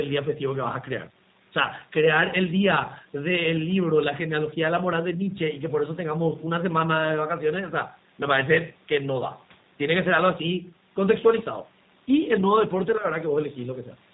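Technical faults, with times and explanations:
throughout G.729 codec: speech is rebuilt from a vocal tract filter and sparse pulses per 10 ms frame, sounding plainly rough and synthetic, which fits 8 kbit/s. The spectrogram shows a flat ceiling with nothing above 4 kHz.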